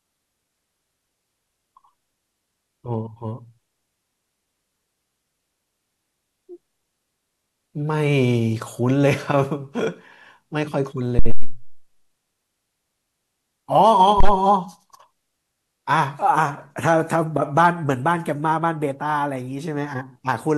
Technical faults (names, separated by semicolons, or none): phantom power thump